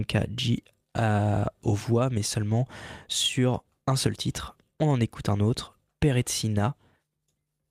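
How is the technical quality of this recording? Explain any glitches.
Nothing in the recording stood out as a technical problem on listening.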